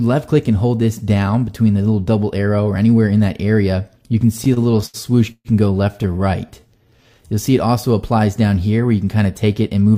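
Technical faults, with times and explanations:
4.37 to 4.96 s, repeated stalls (stutter): Over a bit more than half a second the sound keeps catching and restarting, eight little hitches in all, the longest about 79 ms. Packets were turning up late or slower than playback, so the jitter buffer kept running dry, and each time the receiver stretched out the last bit of sound to bridge the hole. That filler makes up about 28% of the span, roughly 165 ms. Nothing's actually lost, but it drags and stutters.
5.32 to 5.47 s, call audio freeze: The sound stops moving forward for about 131 ms. It first carries on as a held, fading continuation of what came before, then drops to near silence for around 50 ms before picking up right where it left off. The likely cause is packets getting held up in transit, which emptied the jitter buffer and left the receiver to fill the wait. Nothing goes missing, but the gap pushes everything after it about 131 ms later.
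6.46 to 7.36 s, jitter buffer slow-down: Here the audio drifts slower, running at about 86% speed while the pitch stays put, so things sound drawn out. The jitter buffer was low, or had just raised its target delay, so the receiver built up a cushion by repeating single pitch periods and slivers of pauses over and over. All told it adds about 135 ms to the stretch.
9.43 to 9.97 s, jitter buffer speed-up: Right at the end things hurry along at about 110% speed, still at the same pitch. The jitter buffer was holding more audio than it wanted, the sort of backlog you get when delayed packets all land at once, so the receiver trimmed out short pieces of one or a few pitch periods in quick succession. Around 70 ms gets shaved off, and that's why it sounds a little rushed.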